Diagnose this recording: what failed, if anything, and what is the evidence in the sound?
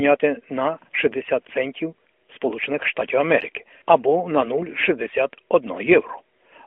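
Nothing in the recording has failed: the speech comes through an AMR narrowband mobile codec path, confined to the telephone band of about 250 Hz to 3.4 kHz, with only the light coding texture expected of the codec's top 12.2 kbps mode, and no stage in the chain shows a fault.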